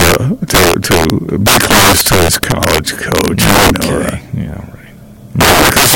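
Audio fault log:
Throughout, integer overflow: speech driven about 15 dB too hot wraps to the opposite sign instead of limiting. Several percent of samples flip, giving violent cracks on loud syllables.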